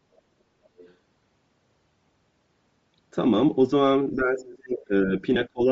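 Speech runs through a grainy, breathy coding texture from start to finish, likely from Bluetooth LC3 compression. The sound fits a low bitrate around 32 kbps with short 7.5 ms frames. The upper spectrum has been thinned and back-filled with noise, so sibilants and the top of the voice sound hissy and synthetic rather than simply dull. A plain low-pass or band limit would only remove the highs, not replace them with this noise-like grain.

From 0.77 to 0.94 s a faint second voice slips in underneath, about 30 dB below the main speech. This is other side's voice leaking through, likely the residue an echo canceller left behind from the far-end loudspeaker. It is a separate voice of its own, not a smear of the talker's own sound, which is what separates it from reverberation or pre-echo.

Between 4.15 and 5.22 s the talker's speech is pushed well down, at its deepest by roughly 35 dB, over about a second in total. 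A second, shallower dip of around 25 dB runs from 5.53 s to the end of the clip. Both are speech suppressed in double talk, likely from the echo canceller ducking the near-end voice while the far side was also talking.

At 5.35 s there is a brief break of about 15 ms, which fits two lost LE Audio frames. Over that gap the decoder repeats the last spectrum with scrambled phase. The result is a short noisy smudge in place of the speech, not the hard silence of a true gap or the repeated fragment of a buffer glitch.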